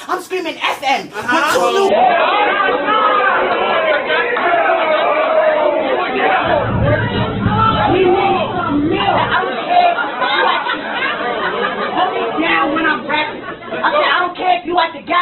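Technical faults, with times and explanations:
1.89 s to the end: adaptive stream at a lower bitrate. The sound snaps down in quality with no gap, and from there on nothing comes through above about 4.2 kHz, so the top end is gone and what's left has that thin codec texture. That's the player switching to a cheaper version of the stream when the connection slowed, and the character fits a step from a healthy Opus rate to something close to 8 kbit/s.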